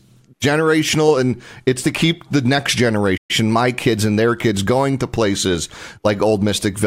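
At 3.17 s, just after "to keep the next", the speech cuts out mid-flow and goes silent for 120 ms before resuming at 3.31 s with "my kids and their". This playback stall is likely the player running out of data or its thread being blocked.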